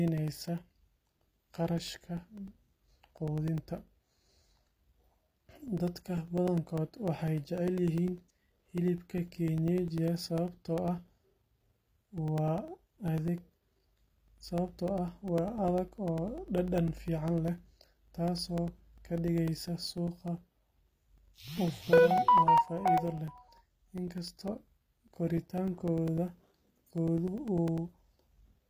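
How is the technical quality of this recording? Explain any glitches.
Technical quality is poor: the speech carries codec damage from start to finish, and a steady stream of tiny gaps runs through almost the whole recording.

The first problem is HE-AAC compression, and it's clearly audible the whole way through. The treble has that synthetic sheen, with s sounds coming out gritty and a bit lispy, and nothing at all above about 15.5 kHz. That's likely HE-AAC v2 at a low rate, something like 24 kbps. The encoder only really codes the lower spectrum and then fakes the top end by copying lower bands upward and shaping them roughly, so the highs sound bright but don't match the real harmonics.

The second is periodic USB or driver dropouts, running from 0.08 s to 28.58 s. Every 0.1 s, roughly 2 ms of audio vanishes and is replaced by silence, which adds up to a few hundred of them. You hear it as an even ticking, about ten a second, riding along under the speech. 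The regular spacing points to a background task stalling the USB bus or audio driver on a fixed schedule, so each stall briefly starves the stream before it recovers.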